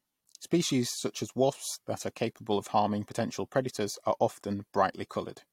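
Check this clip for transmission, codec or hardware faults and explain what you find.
Nothing stood out on listening to the speech in this recording.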